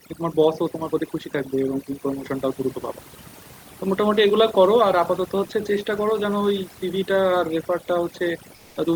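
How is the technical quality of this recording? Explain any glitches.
The quality is held back by heavy-handed processing throughout, plus one short spot where the background changes character near the very end.

Overdone noise removal runs the whole way through. The denoiser was set so aggressively that it shuts down individual frequency bands whenever they dip toward its noise estimate, so the quiet edges of the speech get clipped away too. You hear a lowered background broken up into little twinkling specks.

From about 8.55 to 8.75 s, the real background drops out for roughly 200 ms and gets replaced by a flat, featureless hiss, about 1 dB quieter. That's likely comfort noise in place of the background: a transmitter pauses sending during a gap and the receiver fills it with synthetic shaped noise. The behaviour points to Opus DTX. The actual room noise, sitting about 31 dB under the speech, is what gets swapped out there.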